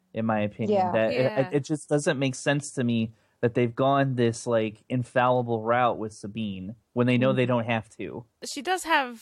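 No technical faults can be heard anywhere in the recording. Nothing in the audio points to a problem with how it was captured, carried or played back.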